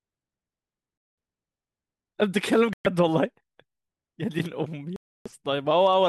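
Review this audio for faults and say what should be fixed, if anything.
The speech cuts to silence at 0.98–1.18 s, 2.73–2.87 s and 4.96–5.28 s, then resumes. These are likely Bluetooth stalls: interference delayed packets and the receiving buffer ran empty until they arrived. To prevent this, keep the phone close to the headphones and away from 2.4 GHz interference, or use a wired connection.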